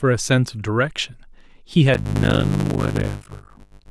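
From 1.93 s to the end of the speech, a block size mismatch (padded) sets in. Each block carries only part of a full block of audio, which fits 256-sample writes, and the rest is filled with silence. The speech slows to about 0.53 times normal speed at roughly unchanged pitch, with a 50 Hz buzz from the repeating gaps. On a waveform, regular near-silent stretches appear every 20 ms. A spectrogram shows vertical striping at that rate and harmonics spaced 50 Hz apart.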